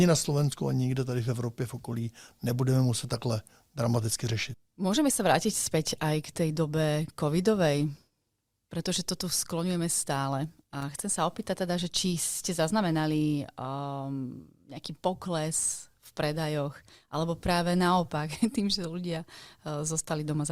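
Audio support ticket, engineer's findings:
Loose connector crackle, 10.81–10.83 s, about 25 ms in the speech track. Probable component: worn or dirty contact in cable or jack, making and breaking as it moves, chopping the signal. Waveform: ragged, irregular interruptions in the envelope. Spectrogram: broadband vertical streaks across the band in that window.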